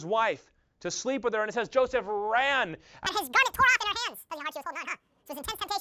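Around 3.07 s the speech suddenly jumps to double speed and a full octave higher, 12 semitones up, and stays that way through to the end at about 5.81 s. That's a wrong sample rate fault: the samples are being clocked out twice as fast as they were captured, with no conversion. The 2.0 ratio fits 16 kHz material played back at 32 kHz, hence the squeaky, rushed chipmunk quality.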